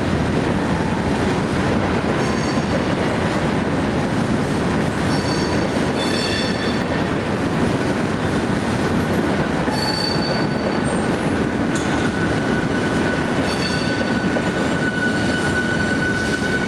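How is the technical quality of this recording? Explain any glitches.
No glitches or technical faults can be heard anywhere.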